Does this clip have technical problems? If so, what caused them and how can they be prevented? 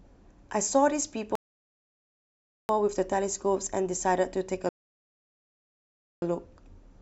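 Yes. The speech is interrupted by two rebuffering stalls, at 1.35 to 2.69 s and at 4.69 to 6.22 s. In each, the player exhausted its downloaded audio and went silent until more data arrived, then resumed exactly where it had paused. No speech is lost, but the stalls add 1.34 s and 1.53 s of dead air. Prevention: keep a deeper playback buffer and use adaptive bitrate switching so delivery keeps pace with playback.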